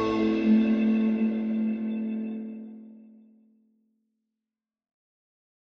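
No technical faults detected.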